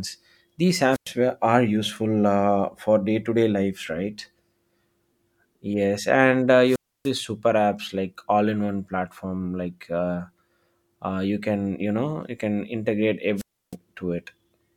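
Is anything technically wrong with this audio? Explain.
Yes, there are three wireless microphone squelch dropouts, at 0.92 to 1.09 s, 6.66 to 7.11 s and 13.36 to 13.76 s. Each time the radio signal fades, the receiver's squelch kicks in, and you hear a hiss, then a silent gap of about 0.10, 0.29 and 0.31 s respectively, before the speech comes back.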